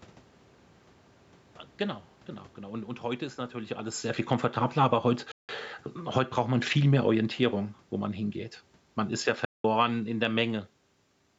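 At 5.32 s, just after "viel komfortabler aber heut", the speech cuts to silence for about 0.17 s, a Bluetooth dropout, likely from packets arriving too late for the headphones. That fits roughly eight lost packets. The waveform shows a flat gap with sharp edges and the spectrogram a blank vertical band. The speech resumes further along, as though it had kept playing.

From 6.02 to 8.4 s, automatic gain falling brings the level down by about 4 dB. The gain control judged the input too loud and pulled it back slowly, so speech and background sink together. The waveform envelope tapers gradually instead of stepping down.

Inside that stretch, from 6.29 to 6.76 s, automatic gain rising lifts the level by about 5 dB. The control reacted to a quieter passage and raised its gain, making voice and background swell together over about half a second. It appears as a brief widening of the envelope and brighter spectrogram energy throughout.

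From 9.13 to 10.4 s a second automatic gain falling lowers the level by about 4 dB, again as a smooth downward slope in the envelope affecting speech and background alike.

Within it, at 9.45 s, another Bluetooth dropout removes about 0.19 s, likely caused by late packets (around nine). It shows as another hard-edged silent gap and empty spectrogram column before the speech continues.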